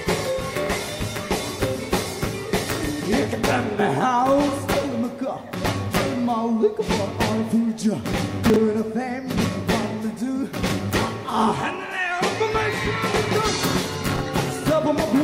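At 8.50 to 8.56 s, 10.68 to 10.72 s and 14.16 to 14.20 s, chunks out of order: a 20 ms block plays one or two slots late, giving a jumbled hiccup, with three vertical broadband spectrogram lines and waveform steps at each splice.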